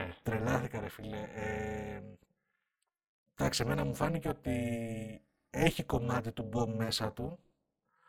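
Overlap-add ripple runs throughout: windowed frames were recombined with an overlap that doesn't sum evenly, so the speech level dips about 60 dB roughly 300 times a second, giving a metallic buzz with extra tones around each note.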